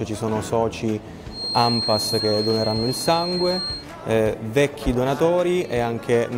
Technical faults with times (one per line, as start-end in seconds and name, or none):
1.28-3.87 feedback whistle